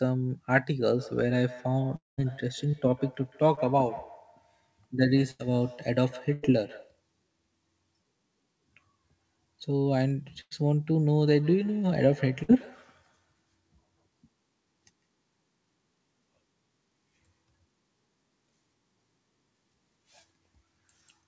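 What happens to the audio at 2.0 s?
Around 2.0 s the sound breaks off at 1.96 s. The last sound is briefly stretched into a fading buzz or hiss, then about 170 ms of silence follows before the audio resumes at 2.19 s with roughly 0.22 s gone. This is likely a long network dropout, with the receiver filling the gap it never got.

Over the whole stretch from 0.87 to 7.02 s, each sound also returns roughly every 150 ms, thinner and ringing, at up to about 19 dB below the speech. This is feedback echo between two devices: a second device in the room replays the call, and the first microphone picks it up again, which its own echo canceller cannot remove.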